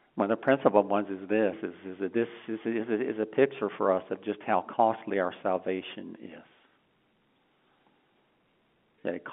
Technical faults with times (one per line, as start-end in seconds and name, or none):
none